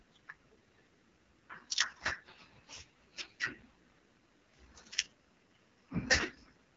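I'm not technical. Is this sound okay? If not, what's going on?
No, the speech sounds rough and raspy the whole way through, with the crisp top end missing. That's the AMR wideband (HD Voice) codec running at its lowest, squeeziest setting.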